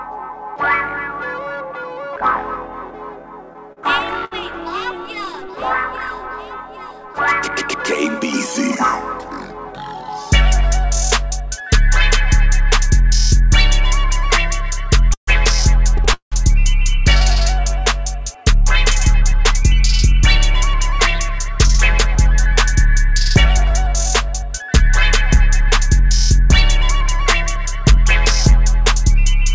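The audio, carried over a call path whose band stops at 8 kHz (consistent with G.722 at 64 kbps), shows repeated stalls (stutter) from 3.53 to 5.35 s, with five brief holds of up to 66 ms. It happens again from 15.14 to 16.34 s, with four holds, the longest 182 ms and faded. The receiver's jitter buffer ran dry, so it stretched the last sound until late packets arrived. Unlike dropouts, no audio goes missing; it drags rather than skips. From 19.04 to 28.09 s, a jitter buffer speed-up runs the audio about 2% fast by trimming pitch-period-sized slices, removing roughly a fifth of a second in total to shrink the excess buffered delay. The pitch stays put, which is what separates it from a sample-rate or pitch-shift error. The passage runs only slightly fast, short of sounding hurried.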